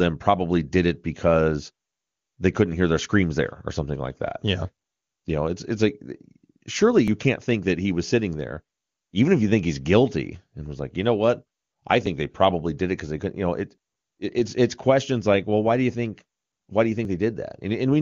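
Audio missing between chunks, likely from a recorder dropping a few milliseconds at each 5 s handover, clips this speech with brief skips at 7.08 s (before "can't think that he"), 12.06 s and 17.05 s.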